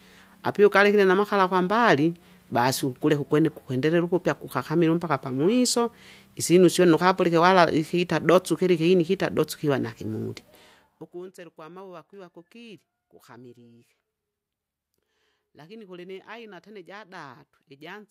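Speech, with zipper noise from 10.47 to 11.25 s, between "dotsu hiva na hing'uli" and "gwa mauwa gwiva gukili". The level drops about 25 dB in unsmoothed steps, roughly 70 a second, so each step ticks audibly.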